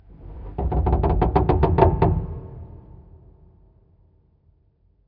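A recording of everyday sounds. No technical fault can be heard anywhere in it.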